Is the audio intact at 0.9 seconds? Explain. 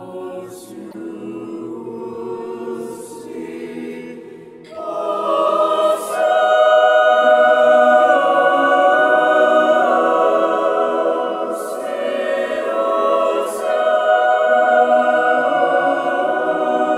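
No. From 0.88 to 0.94 s, about 67 ms, the sound is briefly damaged by damaged data in a compressed stream. Corrupted bytes reach the decoder, which misreads those frames, loses sync and hunts for the next valid frame header, briefly turning out garbled output.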